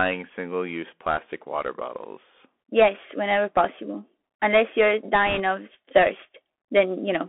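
Throughout, the speech carries the Bluetooth CVSD headset codec. The band sits between 250 Hz and 3.4 kHz. Sibilants turn scratchy over a granular hiss, which fits 64 kbps delta modulation. From 5.27 to 5.41 s, bit errors on a Bluetooth voice link add a rushing crackle. No loud clicks occur. Around 3 percent of bits sound flipped.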